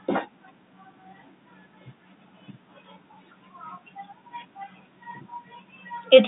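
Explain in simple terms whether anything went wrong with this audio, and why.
Nothing went wrong here; no fault can be heard.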